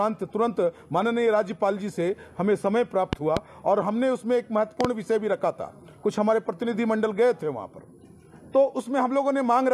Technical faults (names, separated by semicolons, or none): loud pop